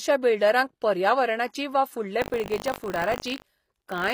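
From the start, the treble sounds rebuilt rather than real. The s sounds come out gritty and metallic. This is likely HE-AAC compression. Copied upper bands stand in for the originals, which fits a low bitrate near 24 kbps.

From 2.2 s, just after "वा फुडले", buffer tearing begins and lasts to the end. A robotic 50 Hz buzz rides on the speech. In each 20 ms period, a small slice replays audio from roughly 70 ms earlier, with hard joins on both sides.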